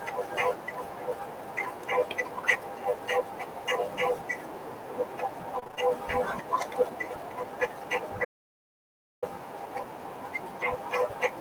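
From 5.55 to 5.88 s, repeated packet loss leaves five short holes, the longest 22 ms, patched by extending earlier sound, so the speech turns choppy with pieces missing. At 8.25 s, an audio dropout to silence, likely from a lost input feed, wipes out about 0.98 s of speech with dead digital silence until 9.22 s.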